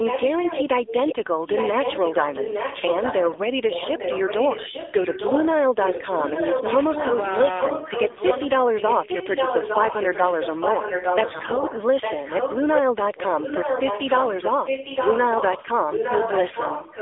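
Throughout the clip the speech is confined to a narrow telephone band, roughly 300 Hz to 3.6 kHz, and has a plainly buzzy, synthetic edge. That is the AMR narrowband mobile codec. It rebuilds the voice from a vocal-tract model driven by a few pulses per 5 ms subframe, and the coarseness heard here fits its low 7.4 kbps mode, where too few bits remain to shape each pulse train naturally.

From 0.86 to 1.15 s a faint delayed copy of the voice trails the speech, about 10 dB down, arriving roughly 0.86 s late. It returns louder, about 5 dB below the speech, from 1.48 to 5.48 s, 5.81 to 7.2 s, 12.01 to 12.79 s and from 15.87 s to the end. This is likely an echo leak: a loudspeaker on the far side fed the microphone, and its echo canceller let part of that signal back into the call.

Inside the second echo stretch, from 3.26 to 3.41 s, the voice keeps its pitch and loudness but turns hoarse and gargly. 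The same happens from 8.04 to 8.20 s, and more heavily from 11.30 to 11.65 s. These are AMR bit errors. Several percent of the weakly protected bits arrived flipped, so the excitation pulses and fine gain and spectral values were decoded wrongly, while the frames themselves still passed as valid.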